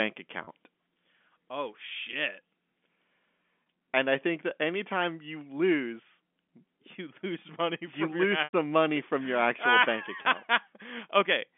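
Packet loss with pitch repetition occurs at 0.44, 2.11, 3.63, 8.44 and 10.22 s. Each time, the receiver repeats the last pitch period to cover the gap, which gives a held, buzzy tone. The gaps last 30, 20, 30, 90 and 30 ms. The 90 ms gap falls between "you lose money you" and "money from your actual". It runs past the roughly 50 ms fade, so the held tone fades out before the speech returns. All of this passes through the narrow telephone band of the G.711 line.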